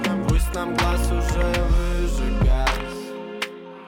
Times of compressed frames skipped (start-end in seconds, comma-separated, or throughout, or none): 1.69